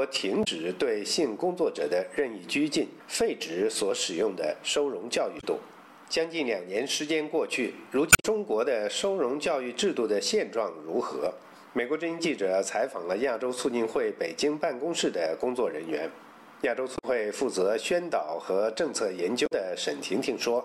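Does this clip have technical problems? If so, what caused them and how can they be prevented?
Yes. Five short glitches break into the audio at 0.41–0.48 s, 5.37–5.44 s, 8.09–8.25 s, 16.94–17.04 s and 19.43–19.53 s, each lasting roughly 70 to 170 ms. They come from damaged data in a compressed stream. At those points the encoded bytes were lost or corrupted, so the decoder misread the frames, lost sync and skipped ahead to the next valid frame header, producing the brief glitch. Prevention: carry the stream over a reliable, error-checked transport and verify file integrity with checksums, so that corrupted frames are caught before they reach the decoder.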